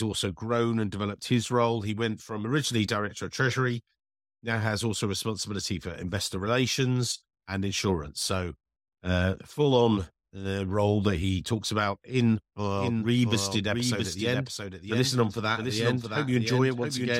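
A doubled audio track begins at 12.75 s in this speech recording and runs to the end: from that point a second full-band copy of the speech sits roughly 0.7 s behind the original, about 5 dB quieter, with no decay or room colouring, and it cuts in abruptly rather than building up. Fixed-delay duplication like this is likely the result of the signal being picked up a second time through a slower path, or of an edit that left two copies out of alignment.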